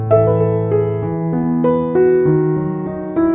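Nothing stood out as a technical fault on listening to this audio.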